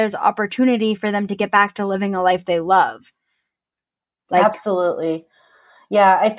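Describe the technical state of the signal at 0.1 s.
At 0.1 s the speech signal is intact, with no audible technical fault at that point.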